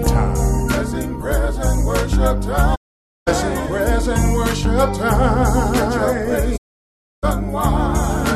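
Two digital broadcast dropouts break the sound. At 2.74 s the audio fades out over about 20 ms and stays silent until 3.29 s, a hole of roughly half a second. The receiver lost good frames and muted rather than play corrupted data. A second dropout runs from 6.56 s to 7.25 s, about 0.65 s of silence. Both gaps are clean mutes, not glitches. The audio resumes further on in the programme, and whatever was sent during each gap is gone.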